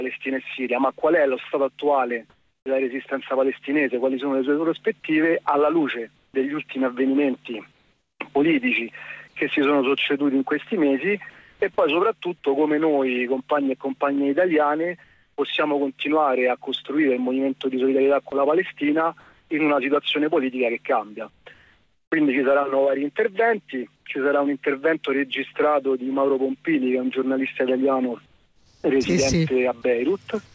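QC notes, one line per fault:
1.00 s, sound dropped by the voice detector. About 20 ms of sound vanishes and steady synthetic noise fills the gap. The sender's voice detector likely judged this quiet moment to be background and stopped sending for about 20 ms. The receiver played comfort noise in its place. The hole is brief, so it reads as a tiny hitch, not a pause. Sending resumes at once.
1.00 to 2.66 s and 15.04 to 15.38 s, comfort noise in place of the background. The real background gives way to a smooth, featureless hiss, about 380 ms of it in the first stretch and 340 ms in the second. The sender likely paused transmission during these quiet spells, and the receiver generated noise shaped roughly like the room. In the second stretch the background sits about 43 dB below the loudest sound. There the fill matches its level, so only the loss of detail gives it away. Like the rest of the clip, the fill has nothing above 8 kHz, which fits the G.722 call codec at 64 kbps.
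6.16 to 11.62 s, 18.30 to 24.06 s and 28.26 to 30.54 s, sound chopped by the voice detector. In each range the sound keeps cutting in and out. Quiet edges drop into comfort noise, about 1060 ms in total in the first range, 1160 ms in the second and 691 ms in the third. The likely cause is a voice detector flipping repeatedly between sending and silence. The sound feels choppy.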